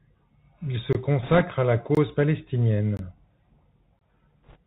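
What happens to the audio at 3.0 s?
A gap between chunks runs from 2.97 to 2.99 s: a hard-edged hole of about 21 ms where the audio stops dead and resumes. Nothing is lost; playback simply stalls at a join, which fits audio delivered in one-second chunks with a late start on the next piece.

The Bluetooth CVSD headset codec is also present here, as throughout. Its one-bit up-or-down coding at a 64 kbps rate cuts everything above 4 kHz, roughens sibilants and leaves a plainly audible granular hiss under the speech.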